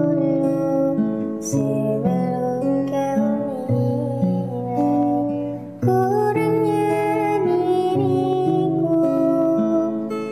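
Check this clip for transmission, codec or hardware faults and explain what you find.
Nothing here points to a transmission, codec or hardware problem; the audio just runs along without a hitch.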